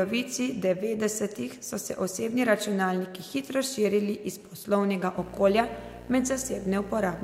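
A speech recording. From 5.17 s to the end, a video or display buzz appears. It is a 60 Hz buzz with hash above it, roughly 15 dB below the speech, from a screen or video cable coupling in.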